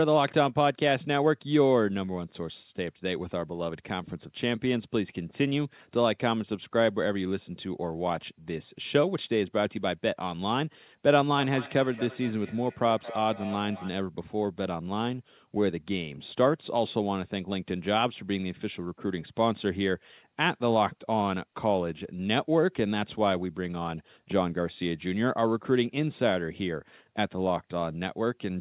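Speech, band-limited to nothing above 4 kHz, which points to a narrowband telephone codec. From 11.38 to 13.98 s there is feedback echo between two devices: each syllable returns roughly every fifth of a second, thinner and more ringing, peaking about 14 dB below the speech. A second device in the room replays this microphone's signal, which the microphone picks up again, and no echo canceller removes it. On a spectrogram, faint copies of each syllable's harmonics repeat at regular offsets. The waveform shows trailing bursts in the gaps.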